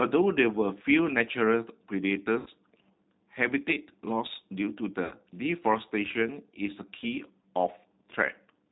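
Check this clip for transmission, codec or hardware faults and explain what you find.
Two faults are audible: a low-bitrate speech codec throughout, and two short dropouts patched over by that codec's loss concealment.

For the full length, the speech sounds narrow, slightly rough and synthetic, with nothing above 4 kHz. This is the G.729 codec, and the damage is plainly audible. The sound points to an 8 kbit/s coder that rebuilds each 10 ms frame from a vocal tract filter, a pitch predictor and a few pulses, which leaves fine texture and anything above 4 kHz out.

At 2.40 to 2.49 s and again at 5.05 to 5.14 s, the speech briefly smears into a held, buzzy tone or coloured noise that sinks in level, then sounds weak or distorted as it recovers. This is VoIP packet loss concealed by the speech codec. Each gap covers about 60 ms of missing audio, which fits three consecutive 20 ms packets. 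The decoder filled the hole by repeating its last pitch and filter with falling gain, and because each frame builds on the one before, the damage lingers briefly after packets resume.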